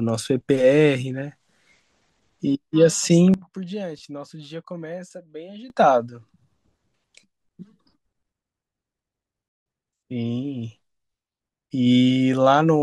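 At 3.34 s the speech and background noise drop together by about 16 dB. They return at 5.7 s. At 9.48 s both drop by about 23 dB until 9.66 s. Each step is abrupt. This sudden gain jump is likely an unramped gain change.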